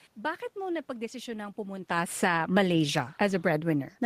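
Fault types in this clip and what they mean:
automatic gain falling: The automatic gain control judged the input too loud and pulled its gain down step by step from about 1.94 s to the end, so the speech and the room noise beneath it sink together; the waveform envelope tapers and the spectrogram's noise floor darkens uniformly.
automatic gain rising: Between 2.41 and 2.82 s the gain control briefly pushed its level back up by 3 dB, swelling voice and background together; on the waveform the envelope bulges slightly, and the spectrogram's noise floor brightens across all frequencies at once.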